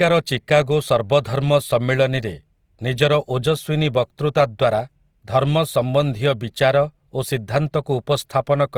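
Plainly audible Opus compression runs throughout the speech. Starved bands are filled with noise, so tones turn grainy and rough. This likely fits about 24 kbps.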